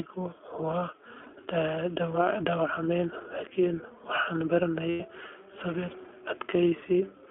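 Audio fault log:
throughout, iLBC codec: The speech sounds clear but slightly rough and synthetic, confined to a 300 Hz to 3.4 kHz telephone band with nothing above it. This matches iLBC, which codes each frame's excitation independently. The audible damage fits its 15.2 kbps mode with 20 ms frames.
1.24–1.27 s and 4.90–5.02 s, lost iLBC frames: Each gap is filled with a held, faintly buzzy vowel-like sound: about 20 ms at the first, fitting a single lost frame, and about 100 ms at the second, fitting five. The decoder repeated the last pitch cycle mixed with noise. Because iLBC frames stand alone, clean speech returns almost immediately.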